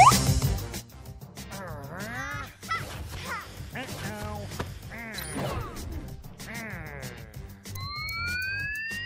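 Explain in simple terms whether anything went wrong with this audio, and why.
Nothing went wrong that I could hear; listening through, nothing stood out as a problem.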